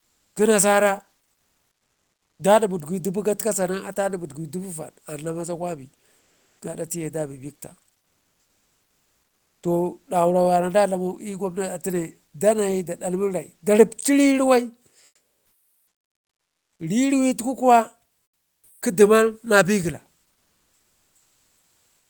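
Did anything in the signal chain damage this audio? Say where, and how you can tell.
Yes. Comfort noise in place of the background at 0.00–0.35, 1.31–2.39, 6.19–6.59, 7.99–9.63, 15.05–16.79, 18.23–18.81 and 20.33–22.10 s. In each speech pause the faint background turns steady and featureless, shifting level up to about 9 dB. The codec stage likely stopped sending during silence (Opus DTX), so the receiver synthesised noise instead.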